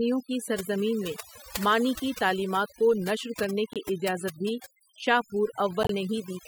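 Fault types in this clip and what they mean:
overdone noise removal: Noise reduction set too aggressively throughout, gating bands near the noise floor, leaving a reduced, twinkling background.
corrupt frame decoded: Damaged compressed frames played anyway, giving brief glitches at 3.73 and 5.83 s, the second louder, spanning a few frames each.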